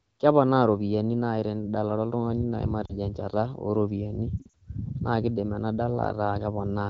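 At 2.85 to 2.93 s, and again at 4.38 to 4.52 s, lost AMR speech frames leave the wideband decoder repeating its last good pitch and tract settings at falling gain. Unlike a hard dropout, the speech warbles briefly and fades to near silence rather than cutting off abruptly.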